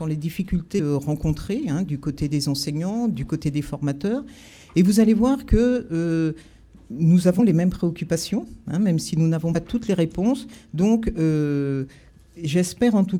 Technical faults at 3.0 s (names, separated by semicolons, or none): none